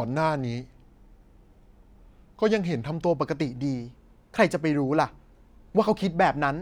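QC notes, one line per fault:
2.93 s to end: section at the wrong speed. Speech runs 1.12 times fast, hurried and about two semitones higher. Likely played against the wrong clock.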